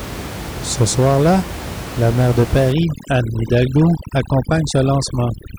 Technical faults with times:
2.72-5.58 overdone noise removal

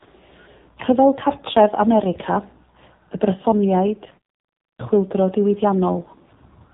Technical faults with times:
0.00-6.74 AMR narrowband mobile codec

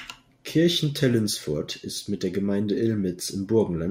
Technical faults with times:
none

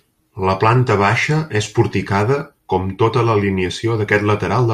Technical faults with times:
none

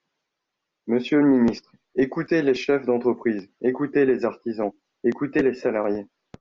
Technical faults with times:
none

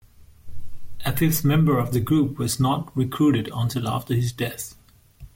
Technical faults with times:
none

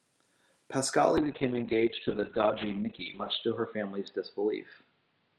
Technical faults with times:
1.19-5.39 call bitrate drop

